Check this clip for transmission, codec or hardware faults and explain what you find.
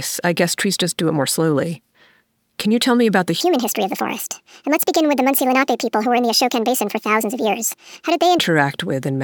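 One fault: a section at the wrong speed from 3.41 to 8.39 s. It plays about 1.51 times fast, raising pitch roughly seven semitones, likely from a clock mismatch. The sound turns high and hurried; a spectrogram shows every harmonic shifted upward, and the waveform's events bunch closer together.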